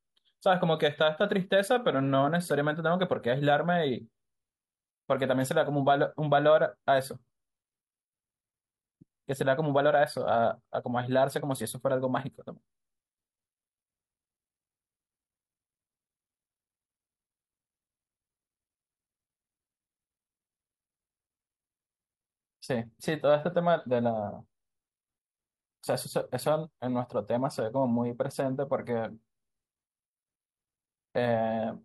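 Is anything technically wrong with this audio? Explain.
No, nothing in this speech recording points to a technical fault.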